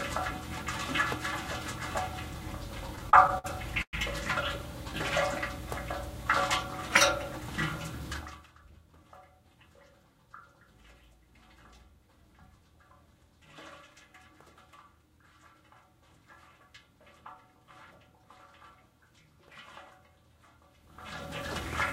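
From 2.87 to 3.46 s the sound hits repeated stalls, a stutter: packets kept turning up late, so the jitter buffer ran dry six times. The receiver stretched the last sound across each gap, about 127 ms in all and 59 ms at most, so it drags and hiccups without losing anything.

Then at 3.82 s there's a brief call audio freeze lasting about 108 ms. The sound hangs, fades, and drops to silence for roughly 70 ms before resuming where it stopped. The likely cause is a batch of packets held up in transit, which emptied the buffer and pushed everything after it about 108 ms later.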